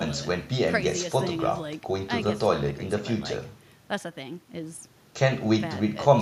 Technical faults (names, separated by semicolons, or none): none